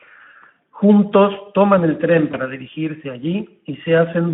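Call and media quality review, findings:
Speex codec, throughout: noisy, hoarse CELP coding from a starved excitation. The band is limited to about 150 Hz to 3.4 kHz, and the damage fits a low setting near 11 kbps.

VoIP packet loss concealed by the speech codec, 2.31–2.36 s, after "toman el tren": a brief fading smear where the decoder extrapolated, consistent with one lost 20 ms frame.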